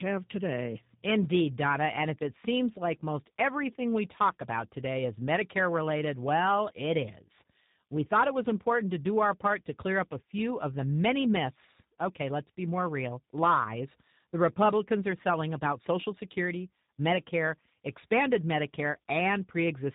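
It's a speech recording with tandem speech coding all the way through: it went through CVSD, then G.711 A-law, then G.729A at 8 kbit/s, so the low-rate coder is working on already roughened audio, giving a muffled, warbly sound with nothing above 3.8 kHz.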